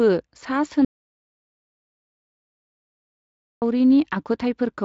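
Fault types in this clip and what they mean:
Audio dropout to silence: The speech cuts off mid-flow at 0.85 s and resumes at 3.62 s. The 2.77 s gap is silent, without room tone. The input was likely lost while writing continued. Anything said there is gone.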